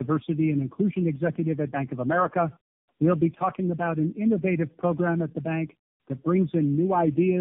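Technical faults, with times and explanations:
Throughout: tandem speech coding. The speech sounds like it passed through several speech coders in series, likely four, consistent with narrowband AMR at around 7 kbit/s at the ends and in the middle, with 64 kbit/s links between. Each stage re-encodes the previous stage's already damaged output, so the errors compound. The result is rough, muffled and warbly, with nothing above 3.6 kHz. It is worse than any single pass through one of these codecs.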